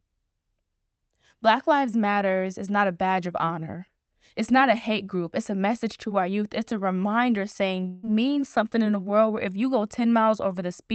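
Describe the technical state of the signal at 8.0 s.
At 8.0 s the audio sits inside a long network dropout, from 7.87 to 8.05 s, after "a reminder saying". The sound turns into a fading buzz or hiss, likely concealment filling lost packets. It resumes at "something in a world", with that stretch missing.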